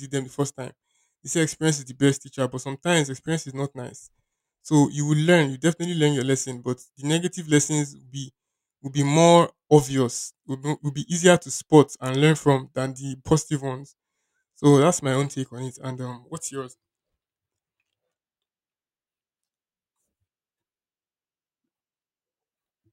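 No technical faults are audible.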